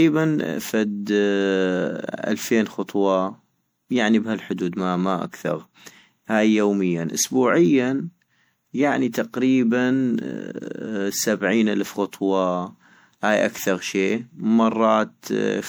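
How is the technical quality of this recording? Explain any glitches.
The speech is degraded throughout by generation loss. It sounds swirly, smeared and hollow, with blurred consonant attacks, likely from around seven rounds of MP3 decoding and re-encoding, consistent with 96 kbit/s. Each pass requantises on a shifted frame grid, so errors accumulate. A spectrogram would show patchy spectral holes and smeared transients, with nothing above 20.9 kHz.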